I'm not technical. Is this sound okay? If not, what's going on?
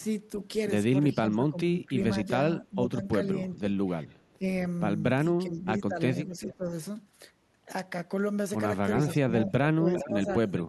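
No. Two problems are audible in this speech. First, speech suppressed in double talk: the voice dips and partly cuts out at 1.14–3.03, 3.35–3.74, 4.37–4.44, 5.28–6.71 and 9.28–10.29 s, likely because the echo canceller confused it with the other side talking and turned it down.

Second, echo leak: a faint repeat of the voice, arriving about 0.4 seconds late, can be heard at 6.45–6.54, 9.08–9.14 and 9.94–10.63 s, likely sound from a loudspeaker that the far end's echo canceller failed to remove before sending it back.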